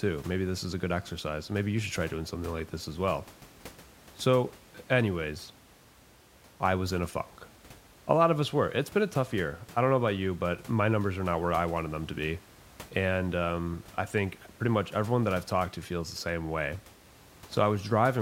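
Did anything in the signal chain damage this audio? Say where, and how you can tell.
No, the signal chain shows no damage, and the only thing under the speech is the room's own background noise, sitting about 24 dB below it as part of the recording rather than anything the system added.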